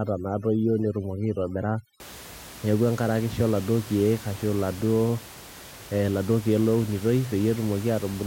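From 0 to 2.0 s there is overdone noise removal. The reduction was set too hard, so bands near the noise estimate are pulled down or cut. The room noise, about 18 dB below the speech, drops and breaks up into twinkling specks.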